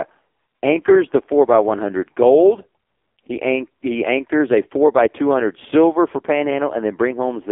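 Throughout, the AMR narrowband mobile codec squeezes the speech into a 250 Hz to 3.5 kHz band, sounding buzzy and synthetic. This fits a low bitrate near 5 kbps, and the spectrogram is empty above 3.5 kHz.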